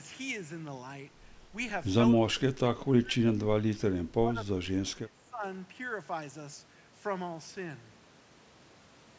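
Speech in which the echo canceller likely mistook overlapping talk for its own echo, producing speech suppressed in double talk: from 2.16 to 3.14 s and 3.86 to 5.43 s the voice dips by roughly 20 to 25 dB.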